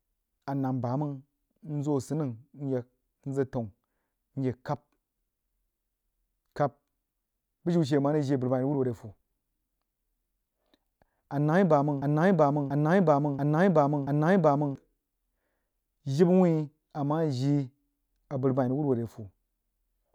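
At 12.02 s a broken-record loop begins and runs to 14.76 s. A 0.68 s fragment of the speech repeats four times, back to back and identical. The player or stream likely stalled and resent its last fragment. The speech due there is lost.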